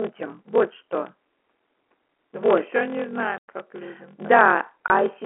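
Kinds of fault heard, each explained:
Block size mismatch (padded): a steady 43.1 Hz buzz, with speech slowed to 0.861 speed at normal pitch, because short blocks are zero-padded, which fits 1024-sample reads.
Packet loss filled with silence: hard-edged holes chop the speech, 100 ms after "все не" and 20 ms at 4.88 s, where lost packets became silence.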